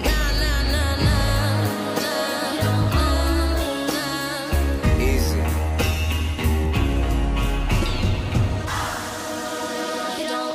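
No technical faults can be heard anywhere here.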